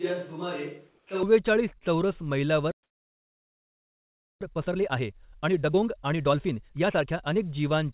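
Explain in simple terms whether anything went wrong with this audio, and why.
Several things went wrong, one after another.

From the very start until 1.23 s, there is a switch to a distant microphone. The sound is roomy and hollow, with less bass. It is noticeably quieter and has more background hiss. The likely cause is that the close microphone dropped out and a farther one took over.

Inside that stretch, from 0.89 to 1.07 s, there is comfort noise in place of the background. For about 180 ms, the real room sound is replaced by a smooth, even hiss. The volume barely changes, so it is subtle. It is likely caused by the sender pausing transmission while the receiver filled the gap with made-up noise.

At 1.79 to 1.84 s comes a short concealed packet loss. About 30 ms of audio never arrived. The receiver patched roughly 21 ms of it by stretching the previous sound. You hear a tiny smear or blip.

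From 2.72 to 4.41 s there is a playback stall. The sound cuts out in mid-flow for about 1.7 seconds. This is likely because the player ran out of data or got stuck.

From 4.41 to 7.41 s there is a time-compressed catch-up. The player hurries through its backlog at 1.5 times normal speed. Small pieces are cut out and blended together, so the pitch stays normal but the audio sounds rushed.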